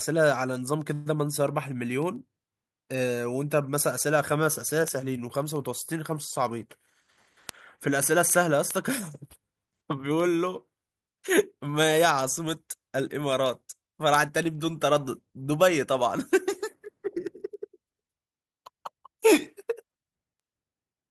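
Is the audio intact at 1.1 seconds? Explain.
Yes, but only just. A call audio freeze runs from 0.93 to 1.08 s. The likely cause is packets held up in transit, leaving the jitter buffer empty. For about 122 ms the receiver stretches the last sound into a fading buzz or hiss, with no true silence. The speech then resumes exactly where it stopped. Nothing is lost. By 1.1 s the audio is whole again, only running about 122 ms later than before.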